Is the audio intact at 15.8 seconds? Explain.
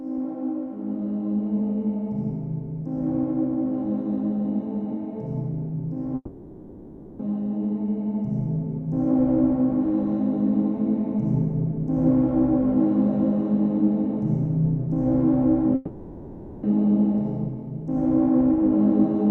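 No. From 15.75 to 16.66 s the last sound stretches into a fading buzz or hiss, and 0.88 s never returns: likely a long network dropout, with the receiver filling the gap.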